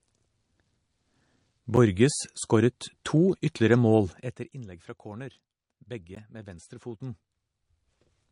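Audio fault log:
Throughout: low-bitrate audio saved at a high bitrate. The speech has nothing above 10.6 kHz, a hard ceiling that fits an MP3 encoded at around 40 kbit/s and then likely re-saved as a 320 kbit/s MP3. The bigger file can't bring back what the first pass threw away, so the dull top end and the artefacts of a low-rate encode carry straight through. The second encode just adds size, not detail.
1.76 s and 6.15 s: block of digital silence. At each point the sound drops to silence and snaps back with no fade, first for about 9 ms and then for about 14 ms, the second one just before "med venstrefoten". Both are too short to hear as gaps, so they come across as sharp ticks from the hard edges, the kind you get when an output buffer wasn't filled in time.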